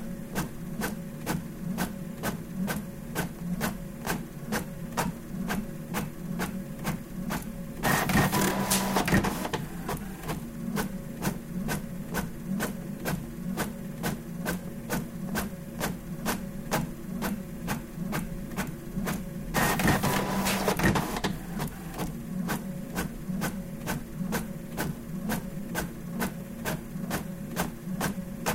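No technical faults can be heard in this recording of sounds. There is no event to place in time and no cause to describe.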